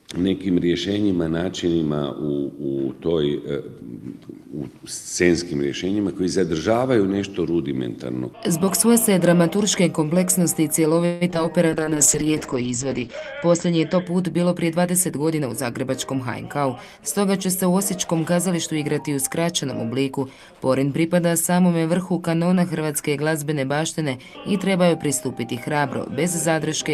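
From 11.05 to 11.46 s there's a burst of repeated packet loss, the robotic-sounding kind. Four gaps hit in under half a second. The receiver papers over most of them by stretching out whatever sound came last, so about 45% of that stretch is concealment. The longest patch runs about 156 ms. Around 60 ms simply drops out. You get a choppy stutter with bits missing.

Right after, from 11.69 to 14.12 s, comes a call bitrate drop. The encoder is clearly being starved. The coarseness points to the rate falling from somewhere near 48 kbps down to around 9 kbps, and it sits at that floor for about 1.5 s. The top end gets chopped too, going from full band up to 20 kHz down to an 8 kHz ceiling, so the audio goes muffled.

Then from 14.37 to 16.98 s you can catch a jitter buffer speed-up. The buffer had built up more audio than it wanted, so the receiver kept trimming out tiny pitch-period-sized slices to catch up. 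In total it cuts about 150 ms. Playback runs about 5% fast with the pitch unchanged, so that section feels rushed.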